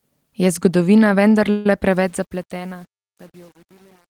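At 1.50 s the speech stops moving forward for about 0.16 s, to 1.66 s, and is replaced by a buzzy continuation of the last sound that decays away. This is a call audio freeze, likely caused by packets arriving late and the jitter buffer running dry. The receiver covered roughly 150 ms with synthesized fill. When delivery resumed, the speech picked up exactly where it had paused, so nothing is lost, but everything after that point sits about 150 ms later.

From 1.91 s to the end, the fade-out loses its smoothness and turns coarse. This is truncation distortion on a fade. The gain stage appears to have kept only 8 bits and applied no dither. As the level drops, the waveform collapses onto a few large quantization steps, producing audible grit. The worst of it starts at 2.29 s.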